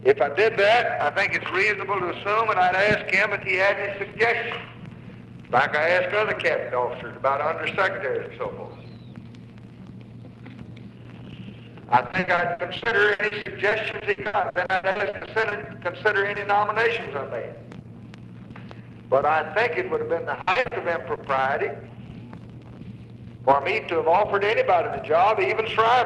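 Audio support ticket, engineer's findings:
Repeated packet loss (robotic sound), 12.07–15.53 s: choppy stretch. Dozens of short holes, longest about 80 ms, patched by stretching the last sound; about 29% of the span concealed. Jitter buffer/loss concealment, not a codec bitrate starve.

Same fault, 20.35–21.19 s: several gaps up to about 60 ms, about 31% concealed. Distinct from a single dropout because holes recur in rapid succession. Call path top end stops near 12 kHz, which fits Opus at 32 kbps.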